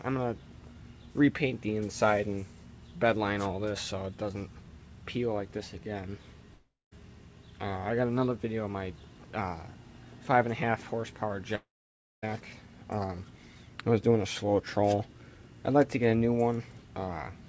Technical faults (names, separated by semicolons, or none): long network dropout